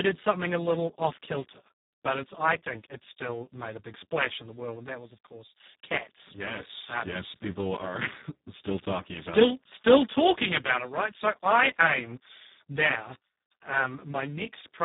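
From start to end the speech sounds hoarse, buzzy and close to robotic, with nothing above about 3.8 kHz. This is heavy Speex codec damage: the harsh, vocoder-like texture fits a very low setting near 4 kbps, leaving too few bits for the excitation.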